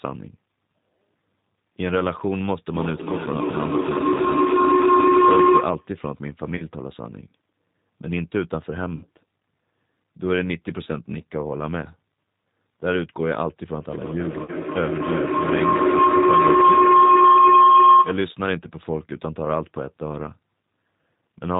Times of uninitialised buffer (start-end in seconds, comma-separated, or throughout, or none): none